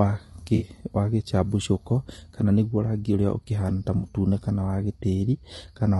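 Throughout, the speech is grainy, with noise between harmonics. This is likely low-delay AAC compression near 32 kbps, whose short frames blur pitch, unlike steady hiss.

At 0.55–0.65 s, before "wa gĩcabicũko kana nĩguo", and at 3.97–4.08 s, between "ũrĩa ũkĩhana ta" and "kana wa", AAC frame loss with concealment leaves smeared, phasey patches of about 60 ms, consistent with three lost frames. Unlike a dropout, sound continues through the gap.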